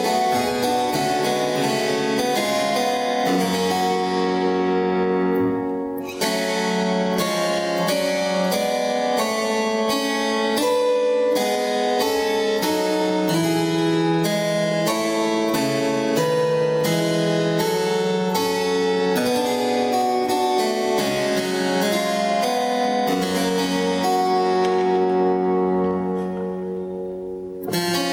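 Gain pumping runs through the whole recording. The gain swells up whenever the sound pauses, then drops sharply as each loud passage arrives, a swing of around 20 dB. The likely cause is input gain set far too high, with a fast limiter or compressor clamping down on every peak. On a waveform the envelope looks flattened, peaks pinned near one ceiling. On a spectrogram the noise floor brightens in each gap and darkens under loud moments.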